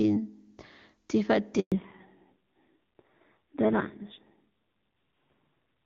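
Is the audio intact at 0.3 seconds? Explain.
Yes, the speech at 0.3 s is intact, with no fault at that moment.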